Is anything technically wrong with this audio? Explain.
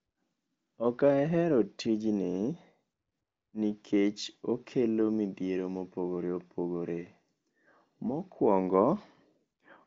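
No, nothing is technically wrong with this speech. Nothing is heard above about 7.5 kHz, consistent with an AMR wideband (HD Voice) codec path running at 23.05 kbit/s, near its top rate, and any coding roughness is faint at most.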